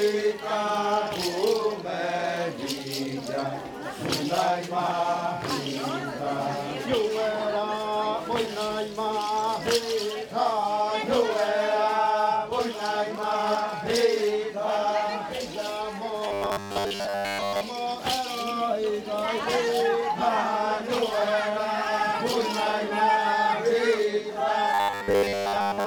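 From 16.28 to 17.61 s, and again from 24.74 to 25.86 s, the audio collapses into a rigid, metallic buzz at 100 Hz that only loosely tracks the underlying sound: robotic sound from repeated short buffers. The likely cause is playback starving for new data and looping the last fragment, here about 10 ms long, so a steady 100 Hz pitch is imposed. In both stretches most of the audio is repeated material rather than new signal.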